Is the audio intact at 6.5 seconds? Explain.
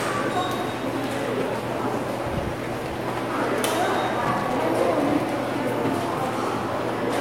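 Yes, the audio is intact at 6.5 seconds, with no dropout, distortion or other technical fault at that moment.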